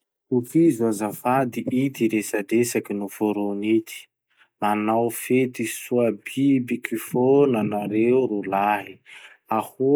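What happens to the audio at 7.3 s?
At 7.3 s the speech carries on intact, with no dropout, click, distortion or other fault at that point.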